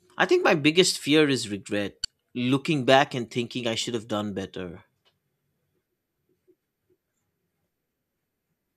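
At 2.02 to 2.05 s, between "my biggest fear is" and "looking back and thinking", damaged data in the compressed stream gives a brief glitch. The decoder misreads corrupt frames and loses sync, briefly garbling the audio.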